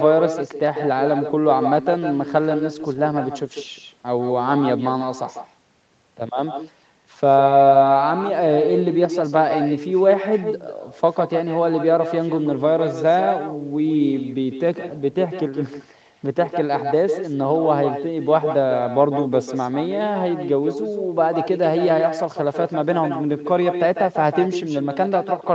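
Echo with no canceller runs through the whole clip, from start to finish. At the far end the call is playing over a loudspeaker, that microphone picks it up again, and no echo canceller strips it out, so the speech returns after a round trip of around 150 ms. Each phrase is trailed by a second copy about 7 dB quieter and thinner, confined like the main signal to below 8 kHz, giving a doubled, hollow smear.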